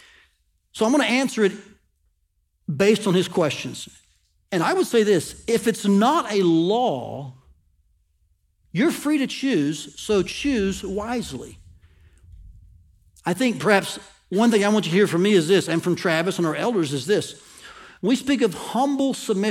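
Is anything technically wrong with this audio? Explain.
No, nothing technically wrong can be heard here.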